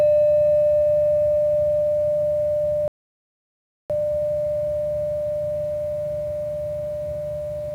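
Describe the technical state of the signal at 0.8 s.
The signal at 0.8 s is intact, with no audible fault at that moment.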